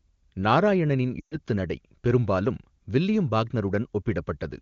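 From 1.19 to 1.38 s come lost AMR speech frames. The decoder repeated the last good pitch and vocal tract settings with falling gain, so the speech smears, then fades quickly. A spectrogram shows flat, dimming harmonics before a gap, and the waveform collapses, then returns weak.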